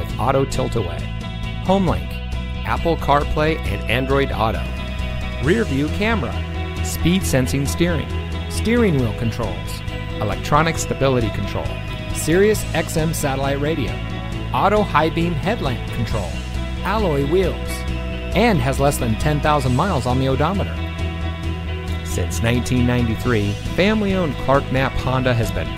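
From 4.59 s until the end, a steady, raspy buzz sits roughly 20 dB below the sound. This is 60 Hz mains buzz: sharp switching spikes, twice per mains cycle, leak in from a dimmer, rectifier or poor shielding, spreading harmonics up to several kHz.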